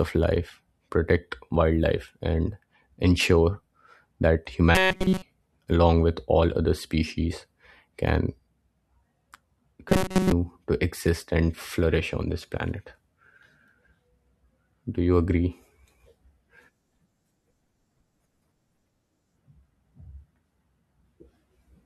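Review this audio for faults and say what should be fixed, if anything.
The speech turns into a rigid, metallic buzz pitched at 188 Hz from 4.75 to 5.22 s, where the whole stretch is affected, and again from 9.89 to 10.32 s, where most of it is. This is robotic sound from repeated short buffers, most likely caused by audio arriving too late so that the last chunk of about 5.3 ms is looped in place of the skipped material. That repeat period sets the fixed buzz pitch. To prevent it, give the playback or capture path a larger buffer margin so new audio arrives before the current chunk runs out.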